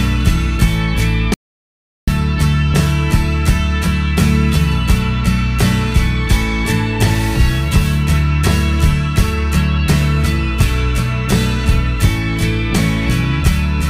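From 1.34 to 2.07 s the sound cuts to dead silence, about 730 ms with no room tone: an audio dropout to silence, likely a lost input.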